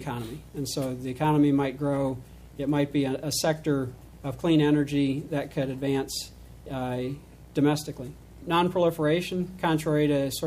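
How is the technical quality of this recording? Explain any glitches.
The recording has one fault: clock slip clicks throughout. From 0.21 s to 10.43 s, small regular ticks recur roughly every 0.15 s, some seventy in all. These are likely single samples dropped or repeated as two unsynchronised clocks drift apart, by around 200 ppm.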